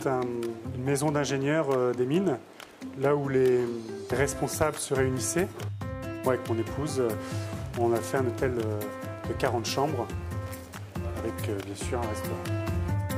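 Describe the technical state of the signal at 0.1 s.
The signal is intact at 0.1 s, with no audible fault at that moment.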